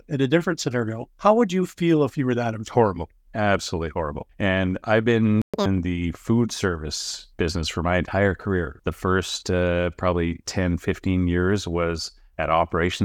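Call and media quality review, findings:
Playback stall, 5.42–5.54 s, right after "I've been": 120 ms of dead silence mid-phrase, then the audio resumes. Likely cause: the jitter buffer ran dry or the playout thread was blocked. The waveform shows a flat near-silent gap. The spectrogram shows a clean vertical blank band across all frequencies, with sharp edges on both sides.

Catch-up at higher speed, 5.54–5.66 s, immediately before "the food service business": the backlog is played at 2× speed via resampling, and pitch jumps by around ten semitones for 120 ms before normal rate returns. The waveform is visibly compressed in time. On the spectrogram, harmonics and formants shift upward and spread apart for that stretch, then drop back.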